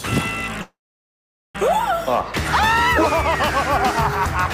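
At 0.61 to 1.58 s a call audio freeze: the last sound fades into about 0.82 s of silence, likely from a starved jitter buffer, then resumes intact, delayed rather than cut.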